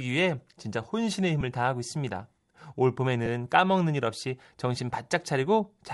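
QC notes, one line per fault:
Throughout: Bluetooth LC3 compression. The speech carries a plainly audible breathy, grainy edge in the upper band, where content has been thinned and replaced with noise fill. This is likely low-bitrate LC3 coding, consistent with around 48 kbps in short 7.5 ms frames.
1.41 s and 3.26 s: lost LE Audio frames. At each point a single 7.5 ms stretch drops out and the decoder repeats the previous spectrum with randomised phase, so the speech briefly smears into a noisy blur before normal decoding resumes.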